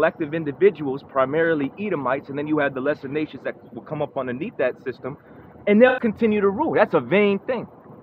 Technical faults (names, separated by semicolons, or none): corrupt frame concealed